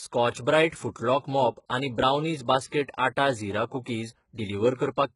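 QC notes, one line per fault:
throughout, HE-AAC compression: treble sounds gritty and metallic, with nothing above 11.1 kHz. It is likely upper bands copied from lower ones, which fits a bitrate near 12 kbps.
2.70–2.72 s, pre-echo: after "मॉप आनी ब्रावनीज", a 26 ms hiss smears in before the attack leading into "आटा झीरा", as block-wide coding noise spills ahead of it.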